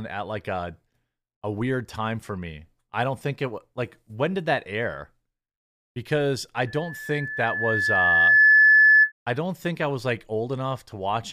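A microphone picking up its own loudspeaker closes a loop whose gain tops one at 1.7 kHz, causing loudspeaker feedback squeal from 6.67 to 9.12 s. A single tone swells over about two seconds into a piercing whistle roughly 15 dB above the speech.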